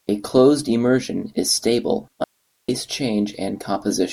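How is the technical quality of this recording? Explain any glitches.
One glitch is audible in this speech recording. At 2.24 s, right after "closed immersion is stable," there is an audio dropout to a faint residue lasting 0.44 s. The signal was likely lost upstream while the path stayed live, leaving only hiss about 50 dB down. The abrupt cut, rather than a fade or pause, sets it apart.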